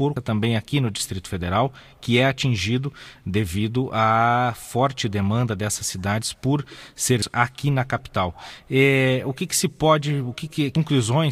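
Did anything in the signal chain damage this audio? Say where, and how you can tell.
Yes. The damage happened at the codec stage: there is damaged data in a compressed stream at 0.16 s, 7.22 s and 10.75 s. Each is a brief chirp, squawk, click or short hole. When the decoder hits corrupted bytes, it misreads those frames, loses sync and has to hunt for the next valid frame header, usually jumping ahead by anything from one frame to a second or more.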